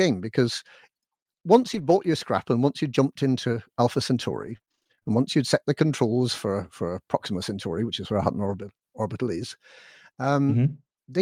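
Scattered short gaps run from 1.73 to 8.54 s in this speech clip: about ten lost packets, each filled by stretching the preceding sound, leaving brief ticks and smears.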